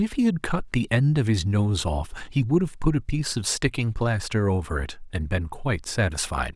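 No technical faults can be heard at any point in the speech.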